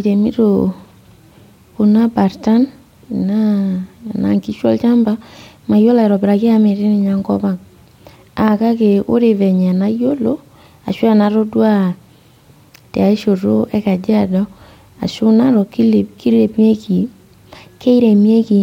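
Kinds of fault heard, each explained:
No technical faults can be heard in this recording.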